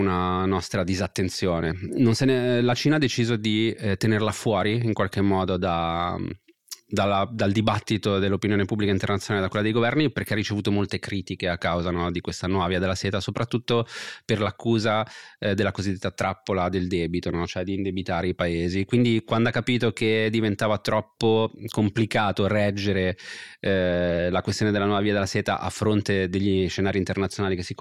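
Listening to the speech recording, nothing stood out as a technical fault at any point.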